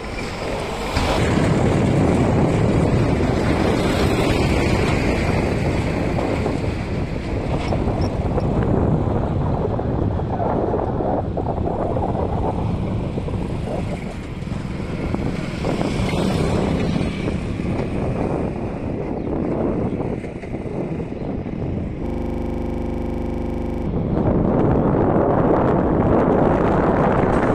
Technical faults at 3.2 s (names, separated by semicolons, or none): none